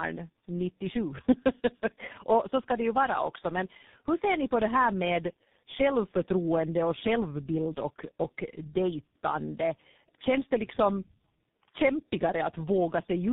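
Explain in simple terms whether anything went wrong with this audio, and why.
Tandem speech coding runs through the whole clip, from the first second to the last. The call crossed three different speech codecs in a row: a GSM mobile coder, a CVSD coder and finally G.723.1. At each border the speech was decoded and squeezed again, so every coder worked on the last one's already damaged output. The result is speech rougher, duller and more warbly than any single link would give, with nothing above 3.8 kHz.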